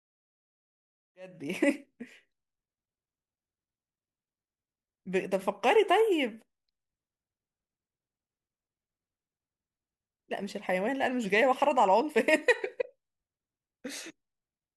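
Nothing is technically wrong with this speech clip; it simply fades in smoothly from about 1.0 s, reaching full level by 1.68 s.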